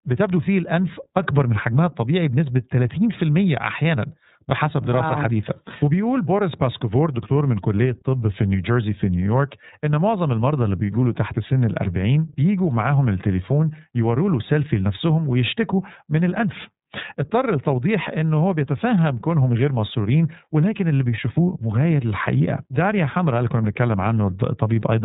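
iLBC codec coding runs throughout the speech, plainly audible. Nothing above 4 kHz survives, each frame's excitation is coded independently, and the speech sounds a little rough and synthetic. The texture fits 30 ms frames at roughly 13 kbps.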